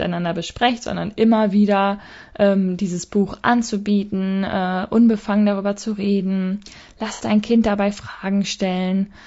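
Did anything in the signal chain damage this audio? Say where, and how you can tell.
Yes. Throughout the speech, the codec stage shows plainly audible roughness and graininess with noise between harmonics, likely from low-delay AAC compression (AAC-ELD) at 32 kbps. This is coding noise, not analogue hiss.

At 7.13–7.22 s, just after "unbefangen darüber zu reden", there is a smeared, noisy patch from AAC frame loss with concealment. It fits two lost frames. It is filled in rather than going silent like a plain dropout.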